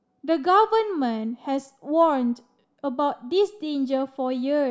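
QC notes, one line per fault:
No faults found.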